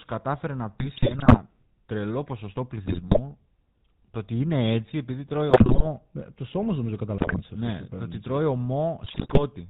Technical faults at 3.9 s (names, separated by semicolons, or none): GSM full-rate codec